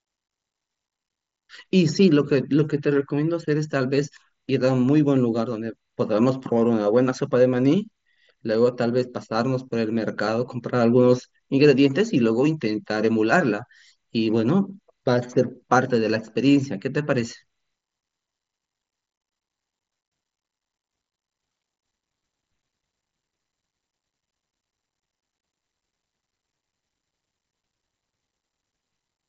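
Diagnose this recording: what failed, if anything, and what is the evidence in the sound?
Nothing in the chain has failed: the speech comes through a Bluetooth mSBC headset link, with content stopping a little below 8 kHz, as expected for that wideband codec at a rate that fits about 61 kbps, and only the light graininess on louder passages that this path normally adds.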